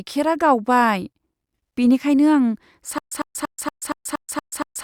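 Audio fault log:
2.98 s to the end: stutter with silent gaps. The speech locks onto a 102 ms fragment and replays it eight times, each pass followed by about 132 ms of dead digital silence, so you get an even burst-and-drop rhythm every 234 ms that never recovers. This is likely a stalled player or stream re-sending its last chunk on each retry and then running dry, so whatever should have played there is simply gone.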